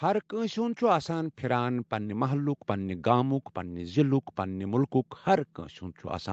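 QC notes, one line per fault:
0.29–4.73 s, automatic gain rising: the gain control judged the input too quiet and lifted it about 7 dB, swelling speech and background together.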